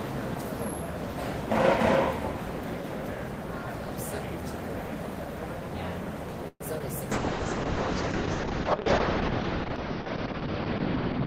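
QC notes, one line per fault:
6.48–6.62 s, call audio freeze: the last sound stretches into a fading buzz, then about 30 ms of silence. Nothing is lost afterwards, likely a late-packet stall adding 125 ms delay.
6.78–6.82 s, short concealed packet loss: a brief smear patches about 20 ms that never arrived. Unlike the freeze, real audio is lost and timing isn't shifted.
7.13 s to the end, call bitrate drop: the encoder falls from 32 to 6 kbps, so the sound turns rough and muffled, with the top cut from 20 kHz to 6 kHz.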